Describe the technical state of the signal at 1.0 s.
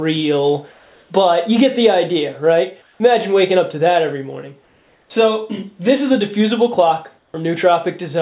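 At 1.0 s the background has turned into a smoother synthetic noise, about 1 dB quieter than the real background it replaces, which sits about 36 dB below the loudest passages. This is comfort noise in place of the background, running from 0.72 to 1.1 s. The sender likely stopped transmitting during the quiet gap, and the receiver filled those 380 ms with synthetic noise roughly matching the background's shape, band-limited like the rest of the call path to nothing above 4 kHz.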